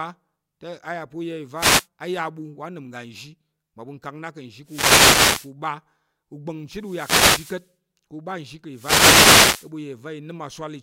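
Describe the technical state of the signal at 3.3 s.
At 3.3 s the speech signal is intact, with no audible fault at that point.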